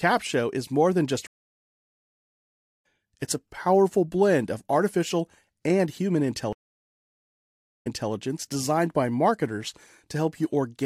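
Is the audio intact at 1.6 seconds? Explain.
No. A stream reconnect runs from 1.27 to 2.86 s. After "is more than just" the connection drops, leaving about 1.5 s of silence, and a fresh decoder resumes roughly 1.5 s further into the live speech, at "it's a powerful blend".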